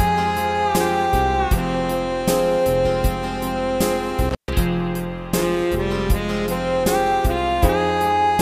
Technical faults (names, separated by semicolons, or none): intermittent contact